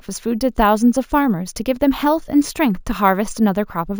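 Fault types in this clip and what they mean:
Imaging from sample-and-hold upsampling: throughout, a metallic fizz between 8 and 16 kHz about 22 dB below the speech, consistent with repeating samples from a 16 kHz source without smoothing.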